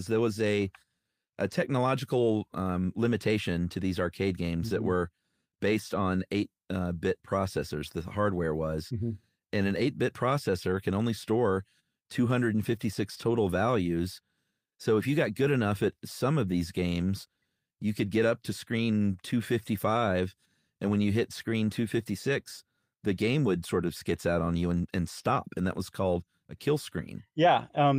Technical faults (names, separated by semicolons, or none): none